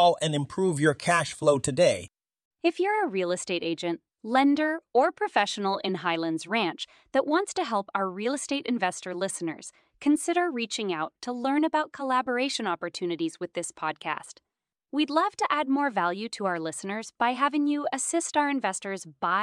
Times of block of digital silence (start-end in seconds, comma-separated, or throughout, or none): none